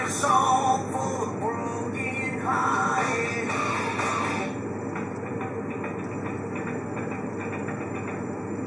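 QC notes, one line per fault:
No faults found. Nothing in the audio needs a QC entry.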